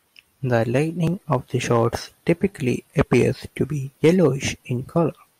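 Hard clipping at 1.32–1.35 s, 1.71–1.87 s, 2.99–3.22 s (before "to be") and 4.04–4.26 s (after "to be"): the speech peaks exceed the level a stage can pass by about 3 to 4 dB and are cut flat, giving a brief harsh crackle.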